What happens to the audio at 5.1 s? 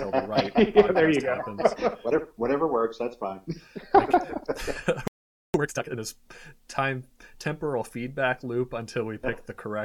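At 5.08 s the sound cuts out mid-flow into a playback stall, staying silent until 5.54 s, a gap of about 0.47 s. The likely cause is the player running short of data or having its output thread blocked, so nothing reached the output until it recovered. Unlike a brief dropout or click lasting a few milliseconds, this silence is long enough to register as a distinct halt before the audio picks up again.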